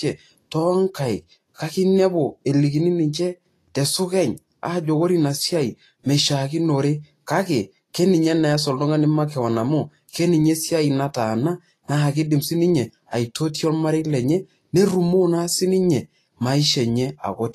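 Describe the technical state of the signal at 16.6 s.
At 16.6 s the speech carries the same damage heard throughout the clip, most likely Vorbis compression at a low setting, consistent with roughly 32 kbps. Nothing survives above 14.2 kHz, and the treble beneath that cut-off is quantised so coarsely that its fine detail is replaced by grainy noise of similar energy, giving a hissy, roughened texture and softened consonant attacks. Unlike steady broadband hiss, this graininess follows the signal and disappears with it.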